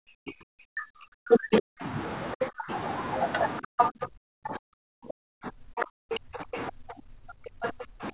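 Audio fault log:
0.29–1.64 s, 2.49–2.65 s, 3.89–6.49 s and 7.31 s to the end, speech suppressed in double talk: the talker's level sinks by as much as about 40 dB, about 35 dB in the last stretch and about 30 dB in the short dip at 2.49 s. The first and third stretches each lose around a second of sound in total. The likely cause is an echo canceller that heard both sides at once, could not tell the talker from the loudspeaker echo, and pulled everything down.
3.78–4.06 s, 5.8–6.63 s and 7.62–7.69 s, other side's voice leaking through: a second, fainter voice slips through underneath, at about 10 dB below the talker in the first scrap and about 20 dB below in the later two. The final one is only a brief fragment. This is likely the far end playing on the talker's loudspeaker and reaching the microphone, with the echo canceller leaving part of it behind. All three leaks overlap the suppressed passages.
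6.77–7.03 s, background gated by the echo canceller: the room sound drops away by about 28 dB for roughly 300 ms and then returns. The echo canceller clamped the microphone hard while the loudspeaker was active, which removed the ambient noise along with everything else. Once it released, the background came back.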